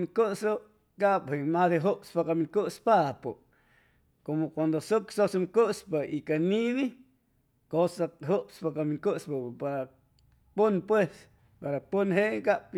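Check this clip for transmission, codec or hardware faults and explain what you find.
No faults found here.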